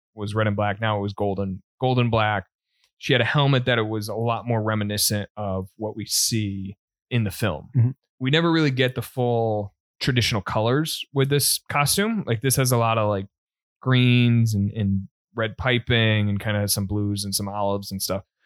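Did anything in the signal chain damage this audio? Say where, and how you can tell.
No, nothing in the signal chain damaged this recording.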